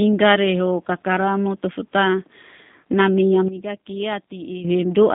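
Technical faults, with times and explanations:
Throughout, G.729 codec: The speech is confined to a telephone band of roughly 150 Hz to 3.7 kHz, with nothing above 3.7 kHz, so sibilants and breath lose their top end. The roughness and synthetic edge are plainly audible, which fits G.729A at 8 kbit/s. That codec does not carry the waveform itself; it rebuilds each 10 ms frame from a vocal tract filter, a pitch predictor and a handful of pulses, and that sparse rebuild is what you hear.
3.48 to 4.64 s, sudden gain jump: The level drops by about 12 dB in a single step at 3.48 s and holds there until 4.64 s, with speech and the background falling and then recovering together. A simultaneous change in both, switched on and off with no fade in either direction, points to a digital gain setting or bit shift that was likely applied and later removed without any ramp.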